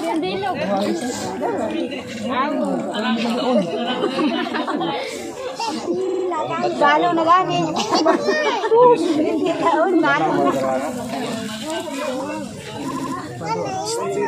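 Repeated frames stutter the audio three times. At 2.16 s a 52 ms block plays once more. At 6.08 s a 52 ms block repeats three extra times. At 12.89 s a 78 ms block repeats thrice, adding 235 ms.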